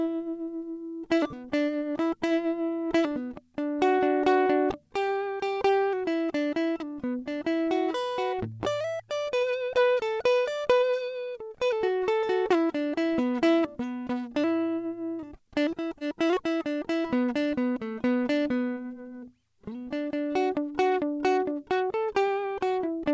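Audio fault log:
15.88–15.93 s and 15.99–16.02 s, short concealed packet loss: twice, about 20 ms of the music arrived too late to decode. The receiver extended the preceding sound and blended back into the real audio, leaving two quick smeared wobbles about a tenth of a second apart.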